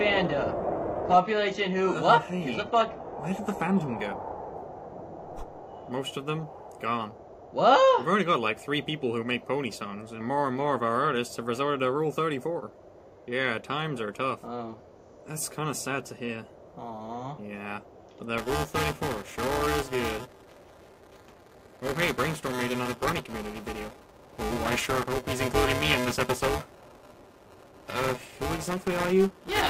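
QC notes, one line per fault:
0.00–4.00 s, adaptive stream starting at a low bitrate: the opening plays from a thin version with nothing above 12.3 kHz, synthetic-sounding treble and heavier artefacts. Quality then jumps with no gap, which fits a step from around 16 to 96 kbit/s. On a spectrogram there is a flat ceiling that lifts abruptly at 4 s.
18.38 s to end, buffer tearing: the program writing the ring buffer and the hardware reading it have drifted into each other. About a fifth of each buffer replays audio a few milliseconds old, with hard joins on both sides. This gives a robotic 375 Hz buzz, which fits a 128-sample buffer, and it is heard only while sound is present. The waveform shows regularly spaced splice discontinuities.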